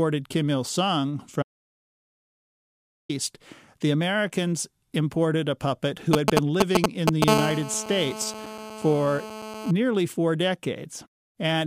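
At 1.43 s the speech stops dead and stays gone until 3.09 s, an audio dropout to silence lasting about 1.67 s. The gap holds no room tone at all, so the input was most likely lost somewhere upstream, a disconnected device or a broken link, while recording carried on writing silence. On a waveform it is a flat line between two abrupt edges. A spectrogram shows a solid black block with clean vertical boundaries, and whatever was spoken in that span is unrecoverable.

Just after "imported a puppet who", from 6.13 to 7.24 s, GSM signalling bursts break in. A nearby 2G phone is exchanging short radio bursts with the network, and the audio circuitry rectifies them into a galloping dit-dit-dit of short buzzes that sit well above the speech. The waveform shows clustered spiky packets. The spectrogram shows short vertical stacks of harmonics spaced at 217 Hz, appearing in irregular groups.

From 7.28 to 9.71 s the phone is in a call, and the interference becomes a continuous GSM phone buzz. 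It is a hard, raspy tone repeating 217 times a second, about 6 dB below the speech and unrelated to it. The rectified transmit pulses draw a dense, comb-like ladder of horizontal lines at multiples of 217 Hz across the spectrogram. On the waveform, a regular ripple underlies the speech throughout that span.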